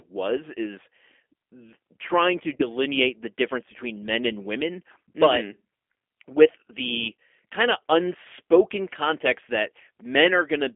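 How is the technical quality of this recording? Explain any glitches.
The recording is plainly degraded by low-bitrate telephone coding, with one brief dropout and one small hole near the end.

G.729 codec, throughout: the speech is squeezed into a narrow line band of about 250 Hz to 3.4 kHz, which fits an 8 kbit/s G.729A stream. The codec rebuilds each short frame from a vocal tract model, a pitch estimate and a few sparse pulses, so the voice sounds thin, slightly rough and synthetic, with no air above the band. The damage is plainly audible.

VoIP packet loss concealed by the speech codec, 2.56 to 2.67 s: about 30 ms of audio went missing, pointing to a single lost packet. The decoder filled the hole by extending its last pitch and filter settings at falling gain, so the voice briefly turns buzzy or noisy and smeared. Because each frame is predicted from the one before, it stays weakened and distorted for a short while after, the whole event lasting roughly 120 ms before the speech recovers.

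Gap between chunks, 10.00 s: a silence of 6.5 ms falls at a join where the audio was split into 4.0 s chunks. Nothing is lost; the sound is simply interrupted at the join, leaving a tiny hole in the speech.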